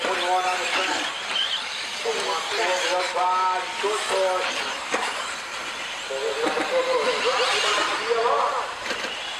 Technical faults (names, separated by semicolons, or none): doubled audio track